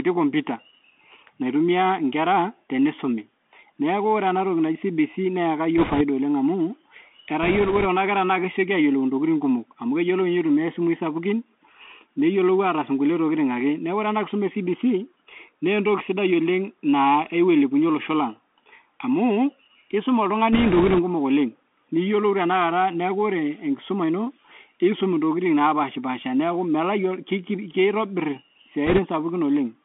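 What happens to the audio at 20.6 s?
Bit errors on a Bluetooth voice link hit from 20.53 to 21.00 s, between "amuu keisuma" and "kumok oleng niyiolou tenakata". Around 5 percent of bits flip. Each bit carries little weight, so there are no loud clicks, just a rushing crackle. Underneath runs the Bluetooth CVSD headset codec. It passes only about 250 Hz to 3.5 kHz, and its one-bit adaptive steps add scratchy sibilants and granular hiss.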